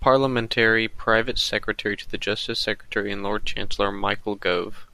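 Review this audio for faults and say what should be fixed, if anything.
Nothing in this speech recording needs fixing. No faults can be heard anywhere in it, so no corrective or preventive step is needed.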